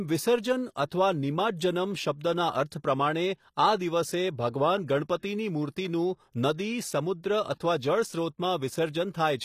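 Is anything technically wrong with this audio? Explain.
Yes, there are two faults. Throughout the speech, the treble sounds bright but synthetic, with s sounds turning gritty and lispy and nothing above 14.9 kHz. This is likely HE-AAC compression, which fits a bitrate around 24 kbps. Spectral band replication copies lower bands upward under a coarse envelope, so the treble harmonics don't align with the real ones.

From 5.18 to 5.23 s, a brief hiss runs ahead of an attack, which then sounds soft and smeared. This is pre-echo. The codec spread quantisation noise across its block, and that noise filled about 46 ms of the quiet moment before the onset.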